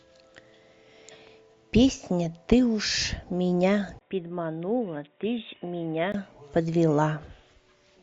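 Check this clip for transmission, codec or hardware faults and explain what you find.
One fault stands out, between 3.99 and 6.14 s. After a brief 20 ms gap at 3.99 s, the speech turns dull and boxy, drops around 10 dB in level, and carries new faint background noise roughly 45 dB down. This is likely an input switched to a poorer device, a narrower-band microphone or headset profile. On a spectrogram, energy stops sharply at 3.8 kHz for that stretch. The waveform shows a dropout, then a shrunken envelope until 6.14 s.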